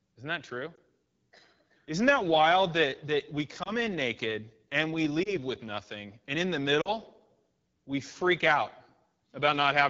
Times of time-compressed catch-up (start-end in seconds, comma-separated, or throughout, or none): none